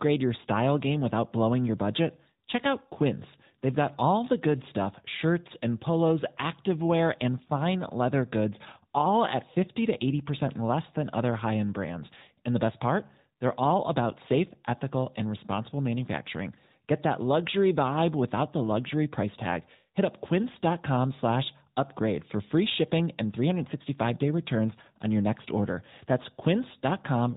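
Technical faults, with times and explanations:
Throughout, AMR narrowband mobile codec: the speech is cut off above 4 kHz by 8 kHz sampling, and each 20 ms frame is rebuilt from a vocal-tract filter driven by a few pulses, giving a plainly audible buzzy, synthetic edge that fits the 10.2 kbps mode.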